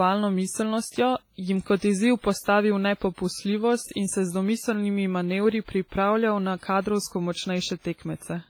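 From start to end, the speech carries heavy codec damage. It sounds washy and ringing. A hiss rises and falls with the voice. Sharp sounds smear over tens of milliseconds. Some quiet detail drops out entirely. The cause is likely WMA compression, a transform codec working in long blocks. Its quantisation noise spreads across each block instead of staying close to the sound. The damage fits an early WMA encoder at a low bitrate, around 24 kbps.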